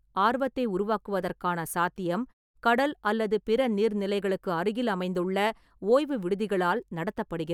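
No technical faults are audible anywhere in this speech recording.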